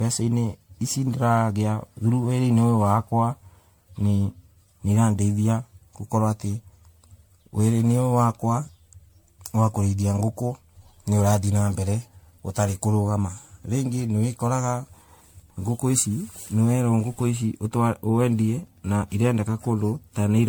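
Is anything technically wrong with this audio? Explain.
Yes. Throughout, there is generation loss: the speech was likely re-encoded around ten times through MP3, in a way that fits 96 kbit/s. Each pass adds new quantisation noise, so it sounds swirly, hollow and smeared, with blurred attacks and nothing above 19.9 kHz.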